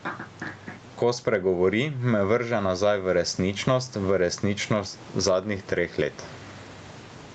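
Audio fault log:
Throughout, gain pumping: the level swings by roughly 15 dB. Loud and soft parts sit close together and sound squashed, likely from excessive input gain clamped by a fast limiter on every peak.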